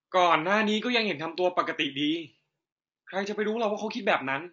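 From start to finish, the speech sounds rough and grainy. Noise fills the gaps between the pitch harmonics. The top band sounds thin and synthetic. The likely cause is low-delay AAC compression, AAC-ELD. Its short frames blur harmonics, and the damage fits about 32 kbps.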